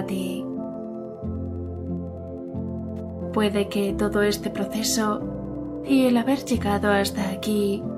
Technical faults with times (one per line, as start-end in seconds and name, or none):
0.00-7.97 Wi-Fi interference